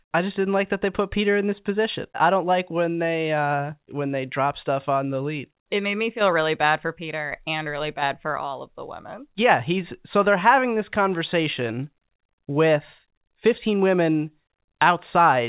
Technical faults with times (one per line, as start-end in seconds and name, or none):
none